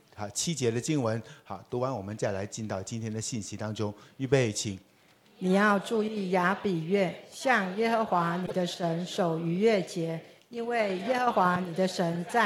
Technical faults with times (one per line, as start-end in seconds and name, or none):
8.43-8.52 damaged data in a compressed stream